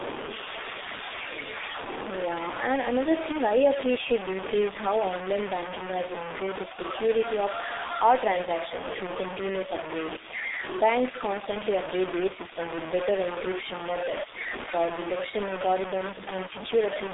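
From start to finish the speech carries a coarse, grainy distortion that tracks the voice, nearly as loud as the speech itself, with quiet passages crackling or dropping out between steps. This is low bit depth without dither, likely samples truncated to about 4 bits.

Throughout, the G.723.1 codec damage is heavy: the speech sounds muffled and hoarse, confined to roughly 250 Hz to 3.7 kHz with nothing above 3.8 kHz, and consonants smear. The slow, frame-based voice model fits a stream of about 6.3 kbit/s.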